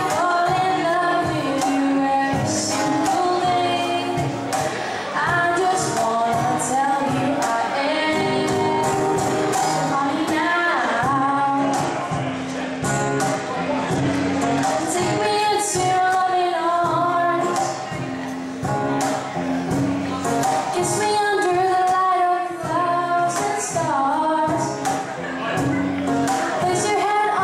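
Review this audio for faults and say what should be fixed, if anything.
From 11.56 to 15.29 s there's a Bluetooth SBC bit pool drop: the top end goes dull and gritty noise creeps in as the link starves, consistent with the bit pool falling from around 28 to 13, roughly 102 kbps. To prevent it, cut radio congestion or pin a higher minimum bit pool.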